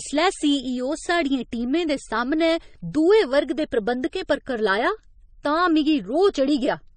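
Transcoding between lossy codecs throughout: nothing above 9 kHz, with stacked smeary, warbling artefacts, likely from MP3 re-encoded to low-bitrate AAC.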